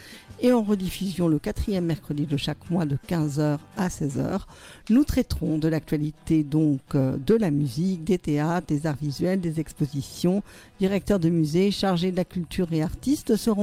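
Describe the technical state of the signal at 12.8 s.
At 12.8 s the signal is intact, with no audible fault at that point.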